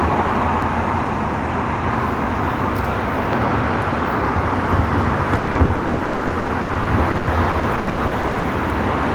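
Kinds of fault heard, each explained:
CD scratch ticks: Between 0.34 and 1.20 s there are four brief ticks, each well under a millisecond, at roughly four to five per second, which fits a blemish passing the laser once per disc revolution. Where the damage defeats error correction, the player interpolates or mutes a few samples, so the result is a tick or tiny dropout. Their regular spacing and tiny length set them apart from packet-loss holes.
Repeated packet loss (robotic sound): From 5.35 to 8.45 s the sound breaks up into a couple of dozen holes, the longest about 120 ms. Each hole is covered by stretching the last stretch of audio forward, so about 1.2 s, close to 39% of that span, is synthetic fill, heard as a choppy texture with pieces missing. Unlike scratch ticks, these are audible gaps full of repeated sound.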